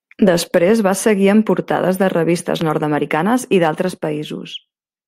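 At 2.61 to 2.63 s, right after "en portades de revistes", a single loud pop stands roughly 10 dB above the speech, likely from a voltage pulse such as a plug or switch transient. Unlike a dropout, the speech continues unbroken beneath this brief thump.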